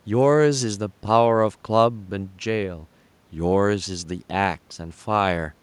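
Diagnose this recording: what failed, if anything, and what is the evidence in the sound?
No system fault; faint room noise, about 40 dB below speech.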